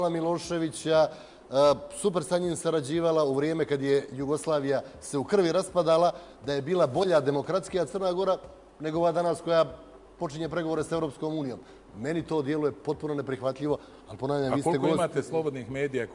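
No dropouts, distortion, timing errors or other technical faults turn up anywhere in the recording.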